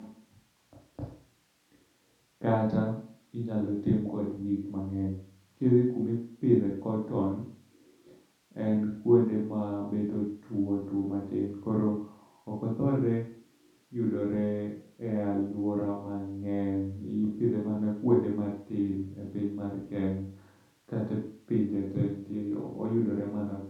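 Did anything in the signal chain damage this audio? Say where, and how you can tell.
No, nothing in the signal chain damaged this audio.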